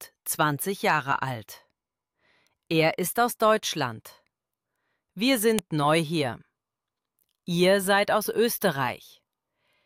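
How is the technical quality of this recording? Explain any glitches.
There's one glitch: at 5.59 s you get a sharp snap, a file header played as audio, where a joined piece's header bytes were read as samples.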